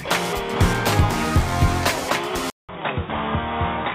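At 2.5 s there's a 0.19 s gap, then the sound turns dull and a bit quieter, with nothing above 3.8 kHz and faint new hiss. Likely an input switched to a poorer device.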